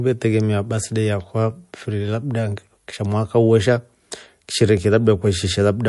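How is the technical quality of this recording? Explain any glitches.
The recording has plainly audible coding damage throughout. MP3 compression, across the whole clip: the watery, swirling treble and metallic chirps on s sounds point to a likely low-bitrate MP3 encode, around 48 kbps, cutting high frequencies and dropping weak spectral detail frame by frame.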